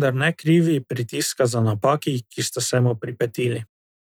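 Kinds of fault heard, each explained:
No technical faults can be heard in this recording.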